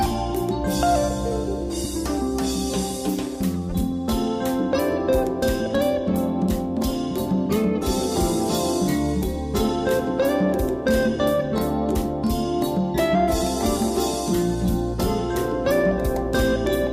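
Nothing stood out as a technical problem on listening.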